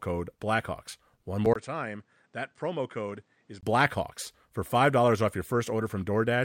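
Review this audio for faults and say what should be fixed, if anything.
From 1.54 s to 3.63 s the speech turns duller and quieter, and likely the input switched to a poorer device. A gap of about 20 ms marks the change. Nothing is left above 9.2 kHz, so the top end is gone. The level drops by about 10 dB. A faint new background noise sits well below the speech. The original sound then returns. To prevent it, lock the recording input to one device and disable automatic switching.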